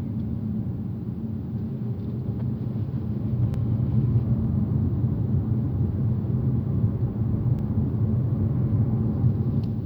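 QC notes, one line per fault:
3.54–3.59 s and 7.59–7.64 s, overlapping chunks: a brief stutter or click at each join, where 48 ms of audio plays twice. Each new block began before the previous one finished, and the joins fall about 4 seconds apart, which fits 4-second processing chunks.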